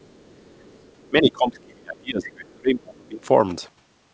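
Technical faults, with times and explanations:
0.00–1.07 s, other side's voice leaking through: A second, very faint voice sits beneath the speech, roughly 35 dB down. The likely cause is that the far end was playing from a loudspeaker and the echo canceller left a residue in the microphone signal. On a spectrogram it appears as weak, separate harmonic traces between and under the main speech. On the waveform it barely adds to the envelope, only a low fill in gaps.
1.08–3.25 s, speech suppressed in double talk: Over about two seconds in this span the talker's level sinks and recovers in pieces, dropping by as much as about 30 dB at its deepest. This is likely the echo canceller meeting simultaneous talk from both ends, failing to separate them, and attenuating everything. The waveform shows sudden gain dips within otherwise continuous speech. The spectrogram shows harmonics fading or blanking in patches, all beneath the 8 kHz ceiling of the call path.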